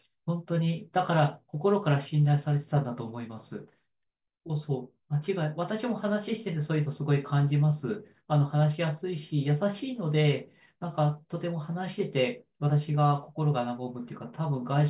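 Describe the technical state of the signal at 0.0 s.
At 0.0 s the signal is intact, with no audible technical fault at that moment.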